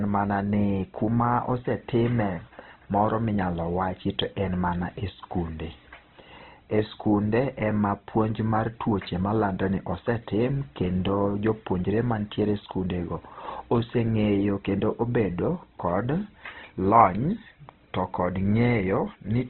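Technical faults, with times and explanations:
throughout: Opus compression. The speech turns rough and grainy, with nothing above 4.1 kHz, likely from heavy low-bitrate encoding. A spectrogram shows a hard ceiling and noise-filled bands.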